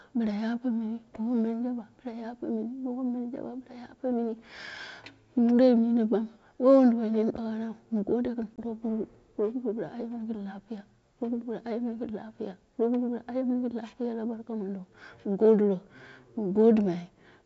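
Speech over a G.722 wideband call, with faint hiss in the upper band. Packet loss on the ADPCM call hits at 8.56 to 8.59 s, just after "nini daiu mu gadiro". A hard-edged 20 ms hole of silence fits about one lost packet. The decoder's predictor and step size then disagree with the sender's. Speech returns briefly with slight distortion, before settling.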